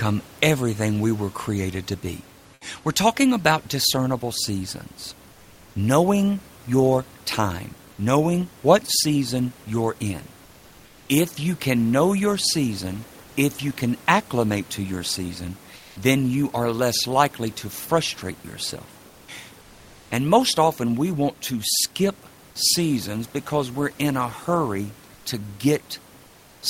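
Comfort noise replaces the room background in pauses at 5.31–5.75, 10.45–11.09 after "what season you're in", 15.76–15.96, 19.08–19.28, 19.61–20.11, 25.14–25.25 and 26.26–26.62 s. Each gap turns flat and featureless, about 1 to 5 dB quieter. Likely cause: Opus discontinuous transmission.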